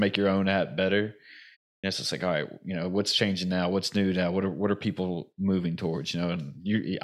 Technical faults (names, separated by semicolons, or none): clipped start after a pause